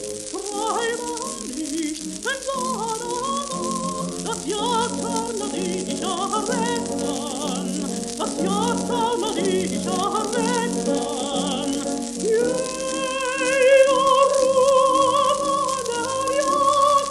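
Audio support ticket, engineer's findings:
No faults found in the signal path; the audio shows no dropouts, clipping, timing errors or level anomalies on review.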